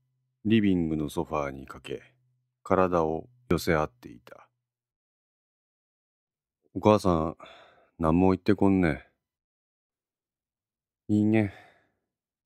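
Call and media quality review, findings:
Two skip-aheads in the speech, at 1.13 s (small, about 10 ms gone) and 3.51 s (bigger jump, around 40 ms). No gap, just a splice. Likely a dropped buffer (overrun) on the capture side: the app didn't read its samples in time, the hardware overwrote them, and the audio either side got butted together. Worth checking capture thread scheduling.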